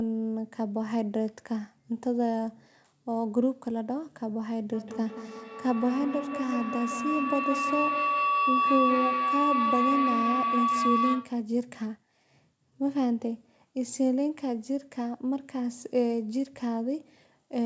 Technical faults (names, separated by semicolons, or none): feedback howl